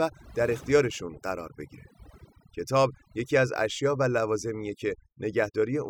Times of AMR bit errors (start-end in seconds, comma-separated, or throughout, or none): none